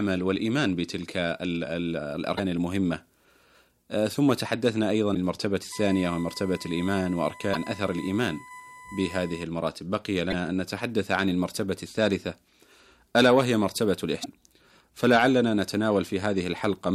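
Damaged data in the compressed stream at 2.34–2.40 s and 5.11–5.16 s: corrupted frames make the decoder lose sync and hunt for the next header, leaving short glitches. USB whine from 5.72 to 9.44 s: a steady 1 kHz tone, roughly 20 dB below the speech, as the bus's 1 ms frame current leaks through power or ground. The same compressed-stream damage returns at 10.28–10.34 s and 14.20–14.26 s, each a similar brief glitch.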